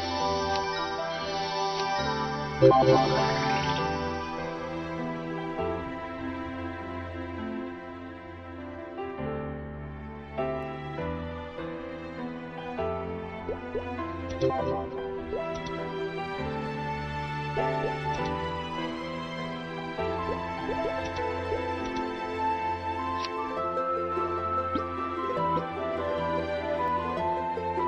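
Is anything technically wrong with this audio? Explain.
Yes. Doubled audio track, 24.12 to 26.88 s: the sound is likely captured twice through a slower second path, so an abrupt, dry echo trails roughly 700 ms behind, about 5 dB quieter.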